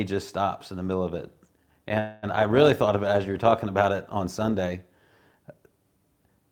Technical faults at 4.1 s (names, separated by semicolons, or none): overlap-add ripple